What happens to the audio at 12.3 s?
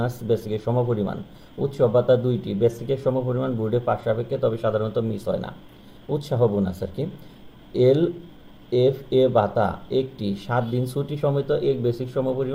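Nothing goes wrong at 12.3 s; the audio is intact at that point.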